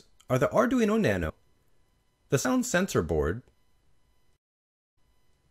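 Compressed frames skipped at 1.30 s and again at 2.45 s: each time the audio jumps forward by roughly a tenth of a second, which fits about three missing 32 ms frames that were either absent from the file or rejected by the decoder as damaged. Each time the sound abruptly resumes further along.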